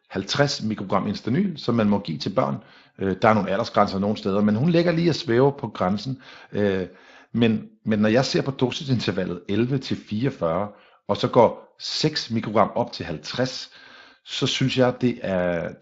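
Speech recording with no technical faults to flag; the Speex coding along its path leaves only a light codec character that doesn't rise to a defect.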